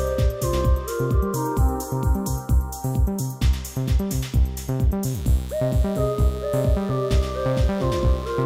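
From 5.03 s to the end, a steady, raspy mains buzz appears well below the sound. Switching spikes leak in twice per 60 Hz cycle, spreading harmonics into several kilohertz.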